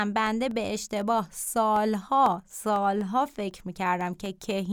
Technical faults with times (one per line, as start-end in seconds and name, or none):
0.26-4.51 periodic USB or driver dropouts